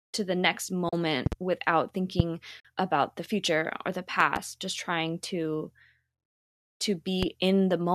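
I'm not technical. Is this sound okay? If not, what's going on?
No, it isn't quite okay. There are two kinds of problem, both brief.

The first is AAC frame loss with muting. The speech briefly vanishes twice: at 0.89 to 0.93 seconds, just after "to the next", and again at 2.60 to 2.65 seconds. The gaps last about 40 and 50 milliseconds. Small chunks of the compressed audio went missing, roughly four and five of them. The player filled each gap with silence. It fades out and back in softly, leaving just a tiny, soft-edged hole.

The second is loud pops. Sharp pops sit on top of the speech, much louder than it. The speech keeps going underneath. There are two pops close together at 1.26 to 1.35 seconds. A single pop comes at 2.20 to 2.22 seconds, right before "about the future or". Another pair comes at 4.20 to 4.39 seconds, between "the future or the" and "just trying to". A last one comes at 7.23 to 7.25 seconds. 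The likely cause is a sudden electrical jolt, such as a plug, a switch or static, getting into the signal.

The clip likely passed through the low-delay AAC compression that video calls use. Its effect here is light.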